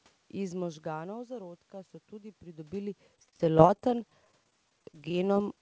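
Speech over a G.722-style call path, with an empty spectrogram above 8 kHz. After the talker moves away around 0.5 s, the input drops by about 14 dB. From 0.6 to 2.85 s an automatic gain rise follows, adding about 4 dB gradually. Voice and room noise swell together, visible as a slowly widening waveform envelope and brightening background floor. From 3.16 to 5.57 s, repeated packet loss makes the speech choppy and robotic. Many brief holes, the longest 32 ms, are patched by stretching the previous sound, together covering about 15% of that span. On a spectrogram this looks like smeared, repeated vertical slices and frozen harmonics. In the waveform, the envelope turns jagged, stuttering and uneven.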